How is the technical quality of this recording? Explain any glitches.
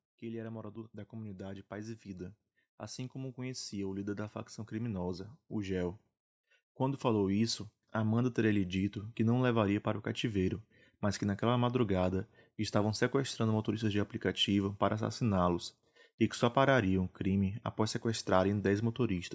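The main flaw is a slow level climb at the start, an automatic gain rising fault, heard through call-style microphone processing that leaves nothing above 8 kHz.

From 0.18 s to 6.0 s the level climbs by about 11 dB. The automatic gain control judged the input too quiet and kept turning its gain up over nearly six seconds. The speech and the background noise swell together. That shared rise across several seconds is what separates it from a compressor's quick pumping, which moves the level within fractions of a second.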